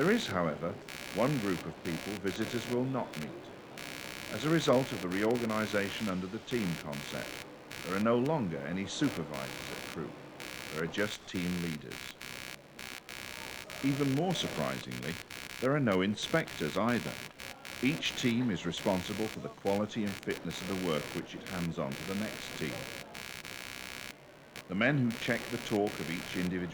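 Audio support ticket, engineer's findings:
Buzzy, chirping noise throughout, pulsing at around 70 Hz, roughly 10 dB under the signal. Computer activity noise: CPU/GPU or mouse load shifts on shared audio ground.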